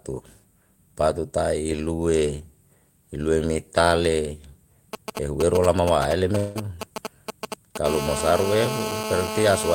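GSM signalling bursts run from 4.93 to 7.77 s: a nearby 2G phone transmitting short groups of radio bursts at about 217 Hz, rectified by the audio circuitry into a galloping dit-dit-dit of brief rasping buzzes, only a few decibels below the speech.

A long network dropout falls between 6.37 and 6.57 s, likely a stretch of lost packets. About 180 ms of audio is missing, and the receiver fills nearly all of it by extending the last sound as a fading buzz or hiss, so no true silence opens before the speech resumes with that part gone.

GSM phone buzz takes over at 7.85 s and lasts to the end: the phone is now in a call, bursting steadily 217 times a second, producing a hard, harmonically rich 217 Hz rasp unrelated to the speech, about 7 dB below it.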